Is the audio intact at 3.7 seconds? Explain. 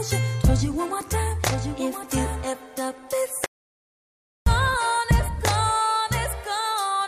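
No, 3.7 seconds falls inside an audio dropout to silence running from about 3.46 to 4.46 s. The sound cuts off abruptly into silence, with no room tone at all, for roughly a second, then resumes mid-flow. It's likely the input was lost while the recorder kept writing silence.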